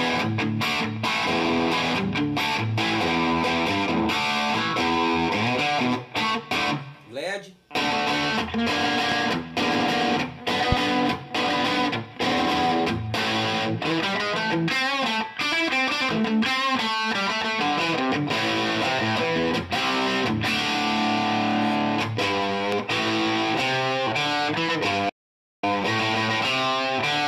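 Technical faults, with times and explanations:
9.12–9.14 s, 10.72–10.75 s and 22.72–22.75 s, loud pop: three separate single pops, each lasting only a couple of hundredths of a second and jumping to something like 15 dB above the surrounding level. That's a sharp transient sitting on top of the sound, which just carries on underneath. This is likely a sudden voltage step or spike from a switch, connector or static discharge, with the following circuitry rounding it off into a click-thump.
25.09–25.64 s, playback stall: the audio drops out completely for just over half a second, about 540 ms, then resumes. The silence lands mid-flow, so it reads as a hang rather than a pause in the material. The likely cause is the player running dry on buffered data or its audio thread getting blocked, leaving the output with nothing to send until it caught up again.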